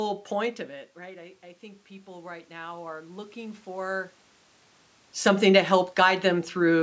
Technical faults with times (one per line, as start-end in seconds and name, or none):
0.98-4.21 automatic gain rising